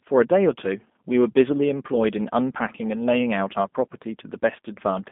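From start to finish the speech carries G.729 codec damage, plainly audible throughout. The sound points to the G.729A variant at 8 kbit/s, where each 10 ms frame is rebuilt from a vocal tract filter, a pitch predictor and a sparse set of pulses rather than the original waveform. The line band runs from 200 Hz to 3.6 kHz, so sibilants lose their air, and the voice comes across rough, slightly buzzy and synthetic.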